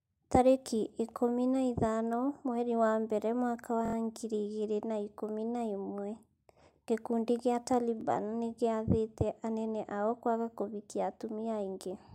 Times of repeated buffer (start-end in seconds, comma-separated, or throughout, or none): 3.85-3.95, 8.01-8.03